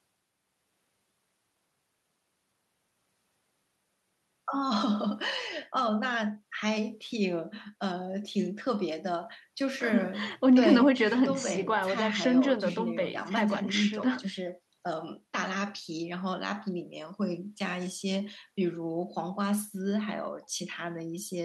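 No technical faults can be heard anywhere in the recording; the speech signal stays steady and intact throughout.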